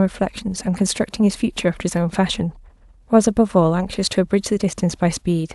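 At 1.89 to 1.94 s, a corrupt frame decoded fault: a couple of compressed frames arrived with flipped bits, and the decoder played them anyway instead of concealing them. Misread gains and codes rebuilt the speech with energy in the wrong frequency bands for roughly the span of those frames, about 50 ms. The result is a short glitch of misplaced sound, fairly loud with a peak around -10 dBFS.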